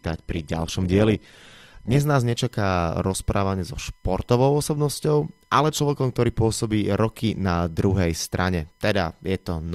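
For the first 2.0 s the speech is dull, with nothing above 12.4 kHz and heavier coding artefacts, until quality jumps cleanly before "nás nečaká rozprávanie so". This is an adaptive stream starting at a low bitrate, which fits around 16 kbit/s, then stepping up.

Throughout, a steady, faint whine sits about 45 dB below the speech. This is USB whine, a 1 kHz bus-frame tone with its strongest component at 2 kHz, leaking in through power or ground.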